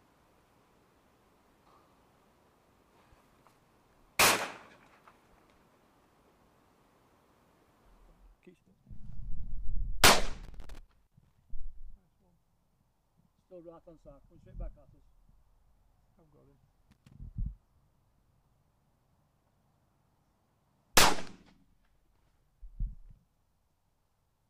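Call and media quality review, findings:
Loose connector crackle, two bursts: 10.44 to 11.38 s (nearly a second), then a shorter one at 16.91 to 17.14 s. Irregular scratchy crackle over the audio. Probable component: a worn or dirty jack or plug contact, likely a cable being nudged. The contact keeps making and breaking, so the signal gets chopped, and any DC on the line turns each break into a pop. Worth reseating or swapping that cable first.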